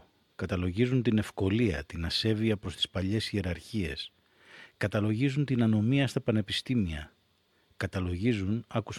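Nothing goes wrong anywhere in this speech recording, so there's no fault to point to at any moment.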